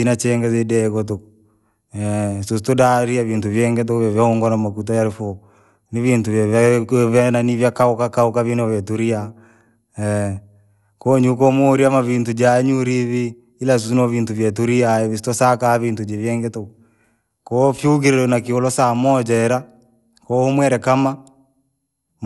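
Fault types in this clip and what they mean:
Generation loss: The speech seems to have passed through a lossy codec about three times, likely repeated MP2 encoding at a rate that fits 96 kbit/s. Each decode and re-encode quantised the signal again on a shifted frame grid, so the errors stacked up. Throughout the clip this gives a swirly, hollow, smeared sound, worse than a single pass at that rate would produce. Consonant attacks are blurred, and nothing remains above 11.8 kHz.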